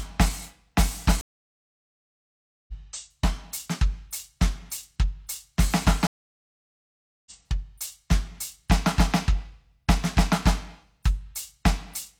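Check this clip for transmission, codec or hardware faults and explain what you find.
Two stream reconnects interrupt the music. From 1.21 to 2.73 s there is about 1.47 s of silence, and from 6.07 to 7.32 s about 1.19 s. Each time the connection dropped, the player reconnected and restarted its decoder mid-stream. Playback resumes roughly 1.5 s and 1 s further on, so that stretch of music is skipped.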